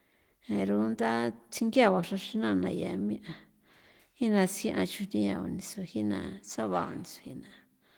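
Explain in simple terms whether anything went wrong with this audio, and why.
Nothing went wrong with this audio, because there is no fault anywhere in it.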